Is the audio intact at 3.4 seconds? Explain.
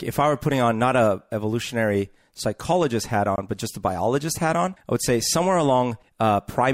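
No, there's a gap at a join of encoded pieces from 3.36 to 3.38 s: untrimmed encoder padding leaves a 20 ms gap between "a evolutionary psychologist hat" and "but just a biologist".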